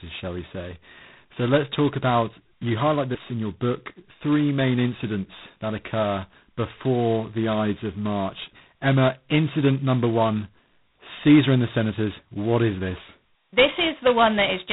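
A harsh, rasping hiss rides on the speech from start to finish, swelling and fading with its level, and nothing passes above about 3.9 kHz. This is heavy G.726 ADPCM damage: too few bits per sample for the prediction error, which fits 16 kbit/s.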